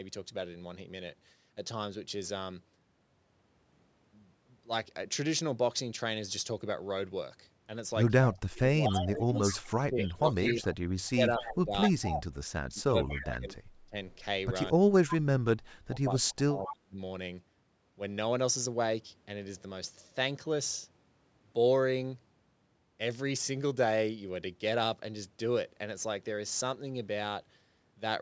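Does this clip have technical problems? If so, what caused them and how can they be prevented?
Yes. Speech suppressed in double talk, likely from an echo canceller that could not tell the near talker from loudspeaker echo while both sides spoke, makes the speech dip by up to about 30 to 35 dB or drop out in pieces between 8.29 and 11.94 s, 12.74 and 13.95 s, and 14.73 and 16.98 s. To prevent it, use a headset or a canceller tuned to preserve near-end speech during double talk.

An echo leak, likely from a loudspeaker-side canceller leaving residual echo, returns a copy of the speech delayed by 238 ms. It sits about 5 to 20 dB below the speech at 8.86–10.64 s, 11.4–12.23 s, 13.11–13.22 s, 15.08–15.15 s and 15.98–16.68 s. To prevent it, use headphones or reduce loudspeaker volume.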